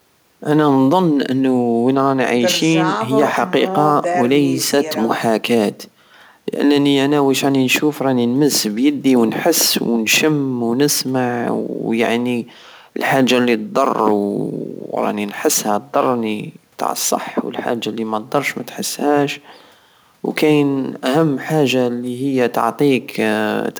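No technical faults can be heard in the recording.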